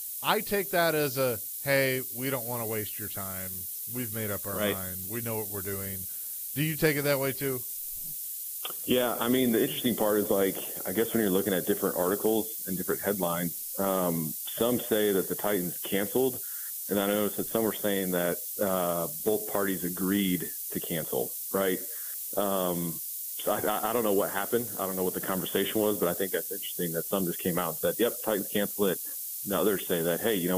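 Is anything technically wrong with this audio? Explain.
Yes. Throughout the clip, low bit depth with noise shaping, at 5 bits, pushes the rounding error upward, leaving a steady, thin hiss nearly as loud as the sound, climbing toward the treble rather than flat or gritty.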